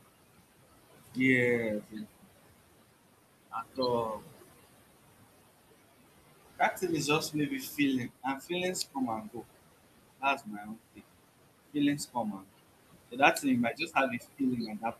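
Throughout, noise suppressor artifacts: the steady room noise, about 12 dB under the speech, is pulled down by about 20 dB frame by frame. It sinks in pauses and rises underneath speech, unlike a plain gate's clean on-off switching.

Speech cut by the noise suppressor occurs at 1.81–2.25 s, 7.3–8.51 s just after "is just", 8.94–9.45 s, 10.18–11.01 s, 11.72–12.51 s, and from 13.11 s to the end. Soft sounds are mistaken for noise and dropped by about 16 to 21 dB. They sound swallowed rather than masked by noise.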